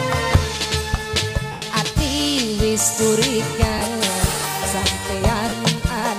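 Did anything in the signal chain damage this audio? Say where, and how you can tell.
Yes, lost LE Audio frames on the Bluetooth link: a 100 ms dropout at 1.52 s and 30 ms ones at 3.78 s and 5.49 s. The LC3 decoder patched each by reusing the last spectrum with randomised signs, smearing the sound into noise that fades during the longer gap.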